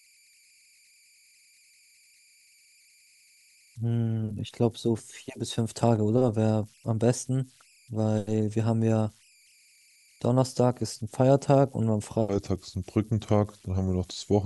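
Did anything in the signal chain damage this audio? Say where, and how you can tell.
Yes. Converter idle tones run throughout: a faint whistle near 2 kHz, about 35 dB below the speech, from an undithered delta-sigma converter. Unlike mains hum, it isn't a low harmonic series.

From 12.29 s to the end, the section is at the wrong speed, running at 0.837 times and roughly three semitones low. Tempo slows with pitch, unlike pitch-shifting, which points to a likely clock mismatch at playback or editing.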